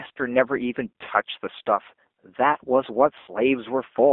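Speech squeezed through a G.729 codec at 8 kbit/s. The line only passes roughly 250 Hz to 3.6 kHz, so it sounds thin, and there's that plainly audible rough, slightly synthetic edge from the pulse-based rebuild of each frame. You can also hear VoIP packet loss concealed by the speech codec twice. The first is a short smear from 1.05 to 1.1 s, about 20 ms of missing audio, which fits a single dropped packet. The second is worse, from 3.2 to 3.32 s: about 80 ms went missing, likely four packets in a row. The decoder stretches its last pitch and filter into a fading buzzy tone or coloured noise, and the sound stays weak for a moment after the packets come back.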